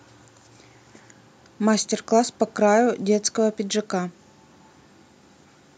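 Listening to this short speech recording, nothing technical stood out.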